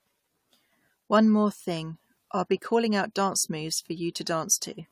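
From start to finish, the speech carries generation loss. It sounds swirly and hollow, with a smeared texture. Consonant attacks blur instead of landing cleanly. The damage is heavier than a single pass at this quality would leave. That points to a lossy codec, likely AAC-LC at around 64 kbit/s, applied about three times over. Each pass requantised on a shifted frame grid, so noise and spectral holes built up. Nothing remains above 19.1 kHz.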